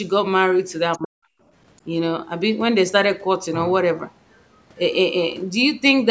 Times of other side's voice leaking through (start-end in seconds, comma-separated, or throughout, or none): 0.94-0.98